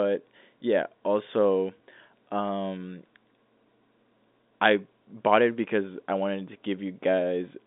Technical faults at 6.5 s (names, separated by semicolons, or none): none